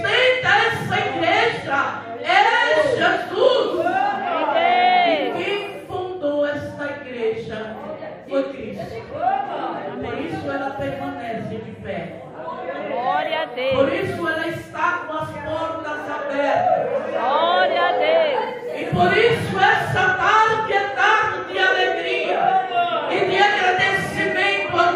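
Nothing in this audio stands out as a technical fault, so there's nothing here to flag.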